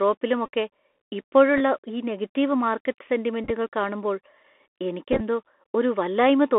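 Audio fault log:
throughout: Bluetooth CVSD headset codec. The speech is squeezed into a narrow telephone band, roughly 250 Hz to 3.5 kHz. The one-bit delta coding at 64 kHz cannot track fast loud rises. So s sounds turn scratchy, and a granular hiss sits under everything.
0.46–0.48 s, 1.57–1.61 s, 3.44–3.51 s, 5.12–5.21 s: Bluetooth headset packet repeated. Headset packets drop out, and the last good packet's bits are decoded again. Each replay lasts 3.75 ms, so runs buzz near 267 Hz. The second event comes just before "ഈ നെഗറ്റീവ് മാർക്കറ്റ്", and the third just after it. The losses total about 19, 26, 34 and 53 ms. The last three are spread in short bursts over up to 83 ms.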